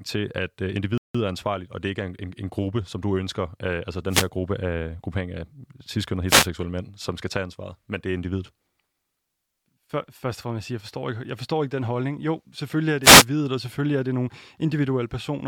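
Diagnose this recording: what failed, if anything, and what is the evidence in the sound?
A rebuffering stall at the network and playback stage: at 0.98 s the speech cuts to silence until 1.15 s, then resumes exactly where it stopped, adding 168 ms. The player ran dry and waited. The waveform shows a flat gap, and the spectrogram a clean blank column.

Wireless microphone noise hits in the analogue FM radio link, at 4.09 to 4.28 s, 6.27 to 6.48 s and 13.02 to 13.25 s. Reflections cancel the signal, so receiver noise surges as brief static swishes, appearing as broadband vertical smears on a spectrogram and hashy bursts on the waveform.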